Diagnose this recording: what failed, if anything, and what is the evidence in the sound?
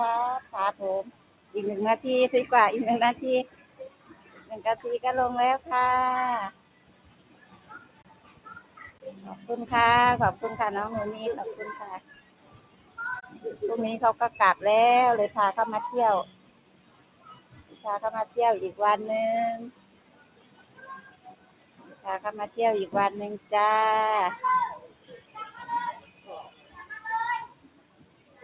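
The sound pumps and thins for the whole clip, in a band that stops near 4 kHz, which points to a G.711 call codec. Attacks come through but held parts and tails sink, with gain swinging by around 20 dB. The fault is in call processing: a noise suppressor applied to music or sounds, tuned for speech, treats steady tone and reverb as noise.

Sound cut by the noise suppressor is clearest at 0.42–1.54 s, 3.46–9.46 s, 11.99–13.4 s, 16.26–18.37 s, 19.71–23.52 s and 24.82–28.42 s. There, sustained sound drops by up to about 12 dB and decays end early. The same suppressor classed these passages as noise and attenuated them harder than the rest.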